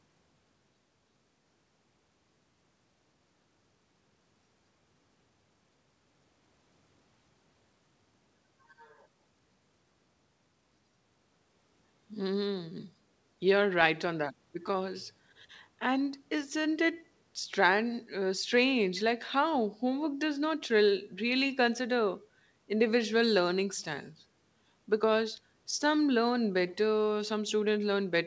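There are no technical faults to describe in time order in this speech.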